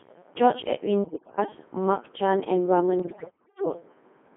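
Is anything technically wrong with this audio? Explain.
Yes, the speech has been through a very low-rate digital voice chain, and it is damaged further in two places.

Codec 2 vocoder, throughout: The speech is coded as pitch, voicing, energy and a rough spectral envelope instead of a waveform, at a rate that fits about 2.4 kbit/s, within a 200 Hz to 3.5 kHz band. The decoder rebuilds the voice from sine waves, so the damage is heavy. The speech sounds robotic and buzzy, with a synthetic tone.

Bit errors on digital voice radio, from 1.04 to 1.38 s and from 3.00 to 3.66 s: Corrupted bits reached the vocoder, and at this low rate each bit sets the pitch, level, voicing or spectrum of an entire frame. The first burst is the more severe, with roughly one bit in seven wrong, against roughly one in fourteen in the second. In both stretches the voice jumps in pitch and loudness, shifts in tone colour, and breaks into warbling, bleeping gibberish.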